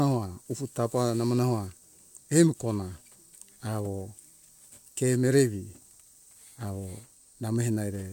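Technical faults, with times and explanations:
The speech signal holds steady from its opening to its close, with no audible disturbance in level, timing, bandwidth or continuity at any point.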